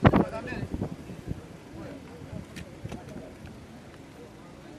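Nothing technical jumps out anywhere in this audio; it runs without any faults worth flagging.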